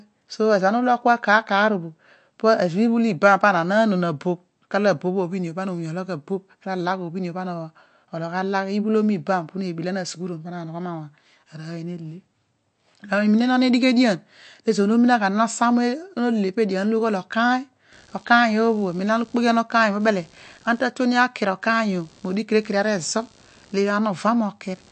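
Through the whole speech clip the sound has a watery, swirling quality, with weak detail flickering in and out from moment to moment and nothing at all above 8.3 kHz, so sibilants lose their top and sound dull. This is likely MP3 compression at a low bitrate, around 48 kbps. Short of bits, the encoder drops the quieter frequency lines frame by frame, so they switch on and off, and it cuts the treble at a fixed frequency.

From 17.92 s to the end a buzzing, pulsing noise sits under the speech, repeating roughly 70 times a second at roughly 35 dB below the speech. It is computer activity noise. Changing load on the processor, graphics card or mouse disturbs the ground shared with the audio circuit, so the buzz tracks what the computer is doing rather than the speech itself.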